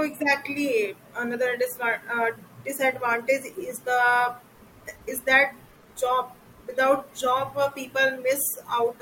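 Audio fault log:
No faults detected.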